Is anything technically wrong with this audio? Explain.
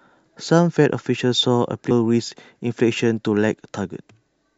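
Yes. At 1.90 s the speech jumps forward with a brief smeared blip as compressed frames are skipped: about ten 26.1 ms frames, roughly 0.3 s of audio, were never decoded.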